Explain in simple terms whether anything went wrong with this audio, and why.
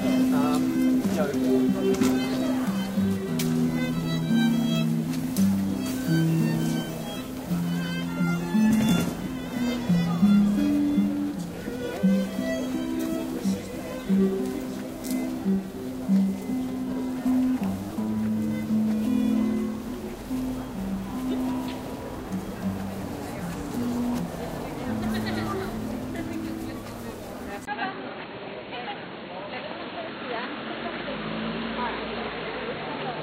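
At 27.65 s the sound briefly drops out for about 20 ms, then turns dull and boxy until the end, with nothing above roughly 4.3 kHz and a faint new hiss, though it's no louder or quieter. That's most likely an input switched to a poorer device mid-recording.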